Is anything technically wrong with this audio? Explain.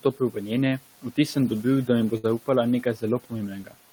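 Yes. Speech cut by the noise suppressor appears from 0.03 to 0.36 s and again from 3.63 to 3.75 s. The suppressor mistook quiet speech for noise and pulled it down by about 11 to 12 dB, leaving those stretches faint and swallowed, with visibly thinned energy on a spectrogram.

A burst of packet loss runs from 2.17 to 2.26 s. The receiver stretched the last sound over about 58 ms, producing a fading continuation with smeared, flat spectral bands. About 60 ms of speech is simply gone, and the waveform jumps ahead.

Room noise sits about 23 dB below the speech and is part of the recording.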